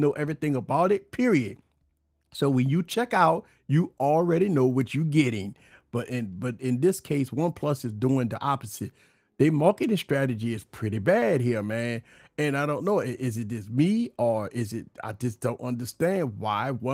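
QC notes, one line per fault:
Nothing stood out on listening to this speech clip, and the light Opus voice compression it carries sits below anything worth flagging.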